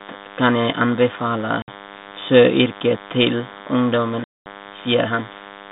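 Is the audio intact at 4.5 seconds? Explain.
No. At 4.5 s the sound is just coming back from a hard-edged silent hole that ran from 4.24 to 4.48 s, about 220 ms, which fits roughly ten lost packets. It returns slightly distorted. This is packet loss on an ADPCM call: the gap was filled with silence, and the receiving decoder's adaptive predictor and step size drifted from the sender's, needing some tens of milliseconds to resync.

Under this sits a steady, thin 100 Hz buzz with many harmonics, roughly 20 dB below the speech. This is DECT cordless phone buzz: the radio sends a burst every 10 ms, and the audio circuitry rectifies those bursts into the signal.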